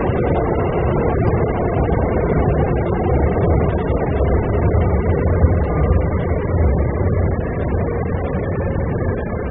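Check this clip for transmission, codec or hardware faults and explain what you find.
The clip has one fault, present throughout: AAC compression damage. Nothing is heard above 3.7 kHz, leaving the sound dull, smeared and warbling, likely from AAC-LC at a starved bitrate near 8 kbps.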